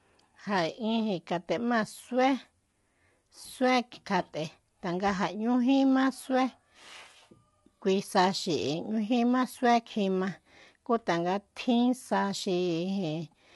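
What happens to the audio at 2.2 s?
At 2.2 s the speech sounds rough and grainy, with a hiss-like haze filling the gaps between the voice's harmonics and nothing at all above 11.6 kHz. The damage is plainly audible and doesn't come and go; it runs through the whole clip. The likely cause is low-delay AAC compression of the AAC-ELD kind: its short frames resolve pitch harmonics poorly, and the coarseness fits a bitrate of roughly 32 kbps.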